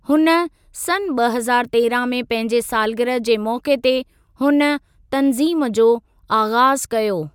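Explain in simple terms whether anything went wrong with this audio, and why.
Nothing went wrong here.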